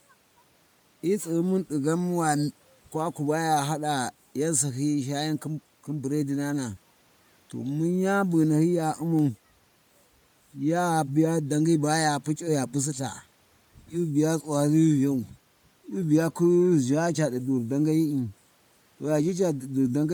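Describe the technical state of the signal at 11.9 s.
At 11.9 s the speech carries the same Bluetooth LC3 compression damage heard across the whole clip: a plainly audible grainy, breathy edge on the voice, likely from an LC3 encode whose character fits 10 ms frames at around 48 kbps. The transform coder discards fine upper-spectrum detail and substitutes noise fill. On a spectrogram the high band looks speckled and blocky at frame intervals while still reaching up to about 20.1 kHz.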